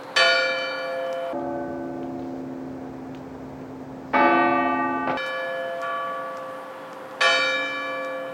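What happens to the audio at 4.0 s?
Stereo read as mono spans 1.33 to 5.17 s. Interleaved left and right samples play as one channel, halving the speed and dropping the sound an octave.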